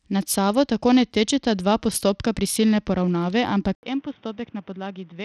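From the start, the speech carries a gritty, flickering top end, likely Bluetooth SBC compression starved of bits, which fits a bitrate around 80 kbps. Then at 3.75 s, right after "dva postopka prisilne poravnave", an 80 ms gap and a dull, boxy, roughly 10 dB quieter sound cut off above 3.8 kHz with faint new background noise suggest the input likely switched to a poorer device.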